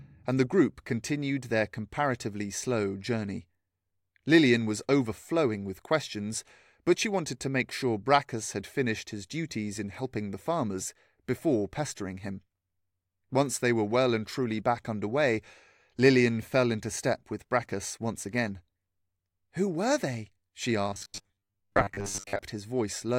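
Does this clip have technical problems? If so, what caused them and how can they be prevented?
Yes. Robotic sound from repeated short buffers appears from 20.89 to 22.39 s: the speech collapses into a rigid, metallic buzz near 100 Hz that only loosely tracks the words. That pitch points to a chunk of about 10 ms being replayed over and over, most of the time in this stretch, while the real audio in between is dropped, likely because fresh data reached the playback software too slowly. Larger jitter buffers and a less loaded processing path would prevent it.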